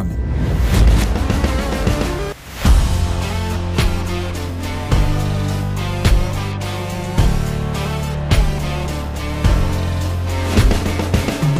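At 1.22 s there is a small forward jump in the sound, with no gap of silence. This is likely a dropped buffer (overrun): a few milliseconds of samples were overwritten before being read, and the two edges were joined directly.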